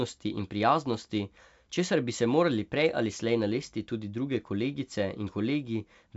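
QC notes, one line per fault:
Nothing to flag on this one: the speech comes over a G.722 wideband telephone path at 64 kbit/s, topping out around 7.7 kHz as that coding normally does, and no faults turn up anywhere in it.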